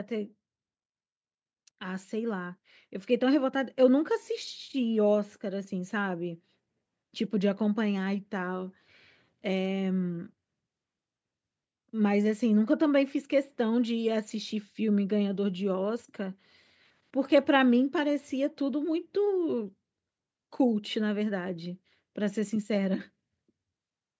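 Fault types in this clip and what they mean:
Automatic gain rising: the input's level control judged the speech too quiet and slowly turned its gain up, by about 6 dB between 0.09 and 10.39 s. The boost acts on the whole signal, so the voice and the background behind it grow louder together, smoothly over ten seconds. That shared, gradual swell sets it apart from a talker simply speaking up, where the background would stay put, and from an abrupt step in level.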